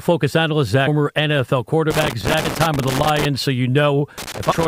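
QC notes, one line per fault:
0.86 s, 2.44 s and 4.51–4.53 s, damaged data in a compressed stream: corrupted bytes make the decoder lose frame sync, giving a brief chirp, squawk, click or short hole in the speech.
1.90–3.25 s and 4.18–4.66 s, loose connector crackle: a worn contact keeps making and breaking, chopping the signal into irregular bursts of scratchy crackle.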